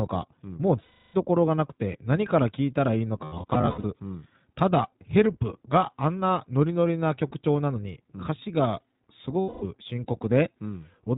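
Throughout, the speech passes through the iLBC codec. Nothing above 4 kHz survives, and each 20 ms frame is coded on its own, which leaves a rough, slightly synthetic edge consistent with a rate near 15.2 kbps. That texture, not just dullness, sets it apart from simple low-pass filtering.

From 0.82 to 1.16 s, lost iLBC frames remove a solid 320 ms. The decoder fills the gap by repeating the last pitch cycle mixed with noise, producing a held, buzzy vowel rather than the silence of a plain dropout. From 3.24 to 3.85 s, about 380 ms is lost in scattered bursts, none much longer than about 70 ms. These sound like brief held, breathy vowels. In both cases the speech snaps back almost immediately afterward.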